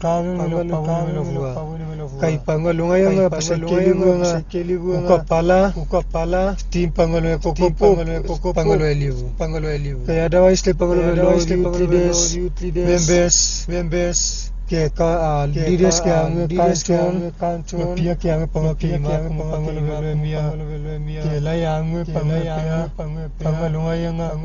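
Doubled audio track, present from start to finish: a second full-band copy of the speech trails the original by roughly 0.7 s, about 5 dB quieter. It has no decay or room colour, so it reads as a flat, out-of-step repeat of every phrase rather than an echo. The likely cause is the same signal reaching the mix twice, once via a slower capture path or through an edit that left two misaligned copies stacked together.

Dolby Digital compression, also across the whole clip: the sound is dull and band-limited, with nothing above 6.9 kHz, and the damage is heavy. A rough, fluttering noise clings around voiced tones. This likely comes from AC-3 or E-AC-3 coding at a starved bitrate, consistent with something near 32 kbps. The encoder narrowed the band and left many frequency lines without mantissa bits, and the decoder filled those lines with dither noise.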